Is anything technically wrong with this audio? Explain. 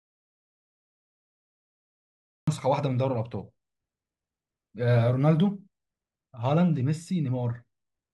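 Yes. From the start to 2.48 s there is an audio dropout to silence. The input was likely lost while silence was still written, so the speech is missing entirely, with no room tone. The waveform shows a flat line, and the spectrogram is blank until the speech comes in abruptly.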